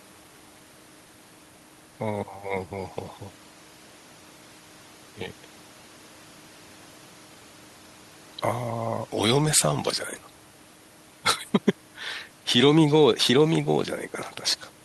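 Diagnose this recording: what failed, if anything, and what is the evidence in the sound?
Nothing in the chain has failed. The speech signal arrives with unbroken timing, a stable level and an intact waveform at every stage from capture through to playback.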